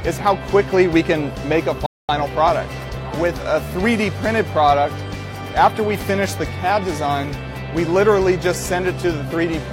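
At 1.86 s a rebuffering stall halts playback until 2.09 s: the player exhausted its downloaded audio and waited, inserting about 228 ms of silence. The sound then resumes exactly where it stopped, nothing missing. A waveform shows a flat gap; a spectrogram shows a blank vertical band.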